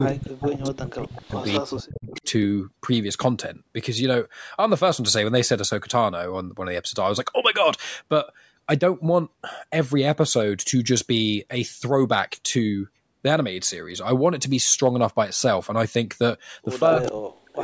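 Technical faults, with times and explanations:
0.00 to 2.19 s and 16.99 to 17.63 s, speech suppressed in double talk: The speech dips by as much as about 40 dB. The likely cause is both sides talking at once, so the echo canceller ducked the near talker along with the echo.
0.09 to 0.14 s, 0.49 to 1.58 s, 2.09 to 2.25 s and 17.05 to 17.12 s, echo leak: A copy of the speech trails 262 ms behind, about 10 dB down, and about 20 dB down at 2.09 s. It is likely loudspeaker echo that the canceller failed to remove and sent back.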